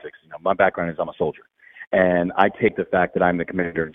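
Brief skips at 1.09 to 1.15 s and again at 2.65 to 2.69 s, where the sound lurches forward by about 20 ms each time: compressed frames skipped, as whole frames went missing or were rejected by the decoder.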